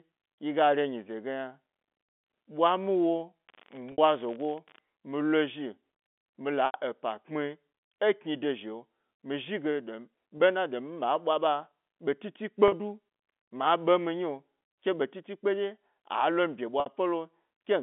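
From 3.47 to 4.81 s, an unreliable data bit adds a constant crackling fizz. One marginal bit flips randomly, making equal spikes, even between phrases. Packet loss with pitch repetition follows at 3.92, 6.66 (just after "mi la"), 10.38, 12.68 and 16.80 s. Gaps of 20 to 80 ms are bridged by repeating the last pitch period, heard as brief held buzzes on the shorter gaps, while the longer ones fade into silence before the speech returns.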